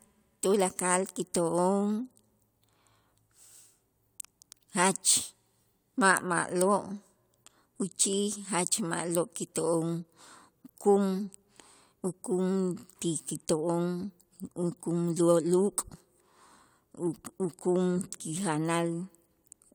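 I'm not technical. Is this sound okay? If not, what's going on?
Yes, nothing in this speech recording stood out as a problem when I listened to it.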